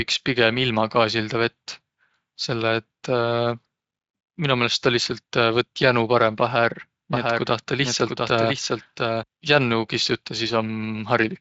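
From 7.13 s to 9.23 s, a doubled audio track appears. A second copy of the speech trails about 0.7 s behind, a few dB quieter, dry and full-band. It cuts in and out abruptly. A slower second capture path is the likely cause.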